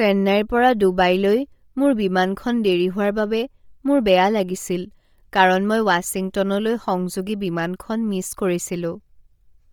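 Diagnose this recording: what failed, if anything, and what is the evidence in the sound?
Codec stage: the speech sounds breathy and grainy throughout, with noise-filled treble rather than real detail. That's likely Bluetooth LC3 compression at a low bitrate, around 32 kbps.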